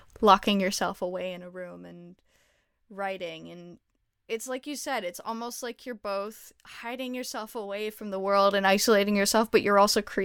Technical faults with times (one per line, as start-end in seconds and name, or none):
0.60-1.60 zipper noise
7.71-8.78 zipper noise